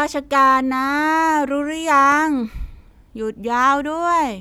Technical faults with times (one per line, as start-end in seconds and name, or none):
2.12 block of digital silence